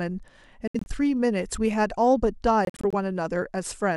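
Bluetooth dropout at 0.68–0.88 s and 2.65–2.94 s in this speech clip: silent holes chop out about 120 ms and 140 ms, with the sound picking up further along, likely from late packets being discarded.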